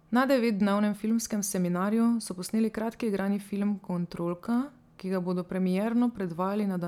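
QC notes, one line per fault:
No faults heard in this speech clip.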